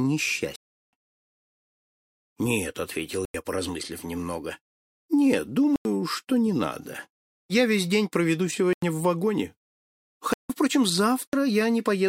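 Output buffers likely went unfilled, so blocks of digital silence replace the sound at 0.56–0.93 s, about 93 ms gaps at 3.25, 5.76 and 8.73 s (fitting 4096-sample buffers), 10.33–10.50 s and 11.27–11.33 s, each an abrupt, unfaded hole.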